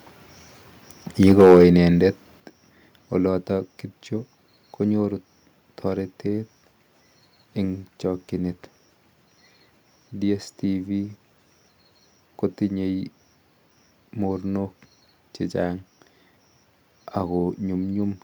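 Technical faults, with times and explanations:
1.27–1.64 s, microphone overload: The loudest syllables in this stretch turn harsh and crackly, with a gritty edge on the peaks. The signal was pushing about 7 dB past what the converter could represent, so around a tenth of the samples had their tops flattened. That squaring-off adds a spray of harmonics that the ear hears as distortion. The likely cause is an input level set too high on the microphone.
1.41 s and 2.4 s, microphone volume stepped down: Speech and background both drop abruptly in level, first by about 3 dB in the middle of the distorted passage and then by about 8 dB a second later. Each drop arrives as a single instant step, not a gradual fade, so the sound seems to shrink suddenly. This likely reflects the call software detecting the clipping and lowering the device's input volume in two discrete steps.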